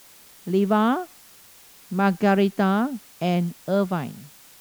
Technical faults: low bit depth with dither

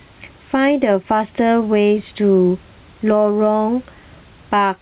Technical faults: gain pumping

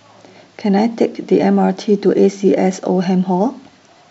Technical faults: none

